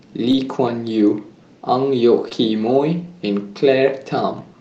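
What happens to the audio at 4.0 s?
Nothing goes wrong at 4.0 s: the speech carries straight through that moment with no dropout, glitch or other fault.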